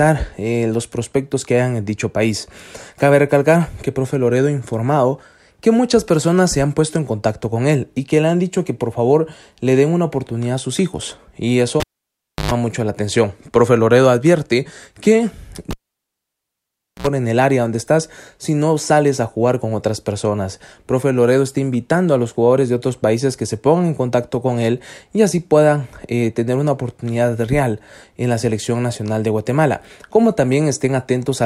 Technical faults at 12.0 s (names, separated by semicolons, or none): cable pulled and plugged in